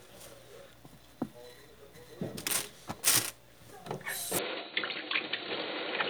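A recording of sounds that abruptly turns duller and narrower at 4.39 s and stays that way to the end. With no gap at the changeover, everything above about 4.4 kHz disappears, the level drops by roughly 5 dB, and a new background noise appears, sitting roughly 30 dB under the signal. This is likely the input switched to a poorer device mid-recording, a narrower-band microphone or headset path with its own tone, gain and noise floor.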